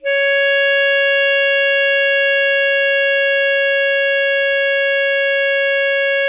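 Nothing in this music stands out as a technical problem; it just runs along without a hitch.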